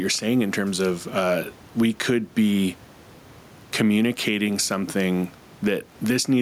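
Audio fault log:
throughout, gain pumping: room noise about 33 dB under the speech sits behind it, with the gain swinging around 10 dB and leaving things squashed. Likely the mic gain is set far too high, with a fast limiter pulling it down.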